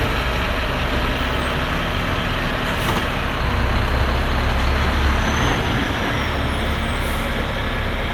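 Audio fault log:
Nothing stood out on listening to these everyday sounds.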